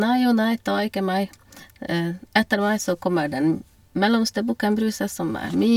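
No technical faults can be heard in this speech recording.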